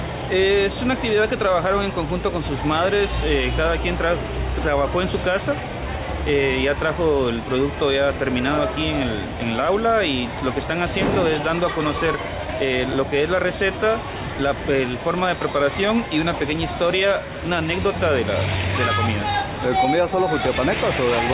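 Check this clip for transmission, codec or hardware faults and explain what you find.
I found no faults anywhere in this clip.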